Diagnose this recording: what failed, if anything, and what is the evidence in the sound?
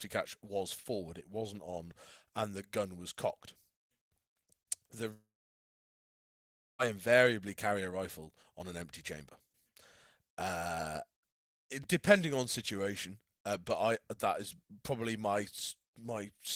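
Network stage: from 5.13 to 6.81 s, a fading buzz gives way to about 1.5 s of flat silence on the waveform, likely a long network dropout.

Buffer stage: chunks out of order at 11.83 s. A 5.33 ms chunk plays one chunk late, leaving three hard joins.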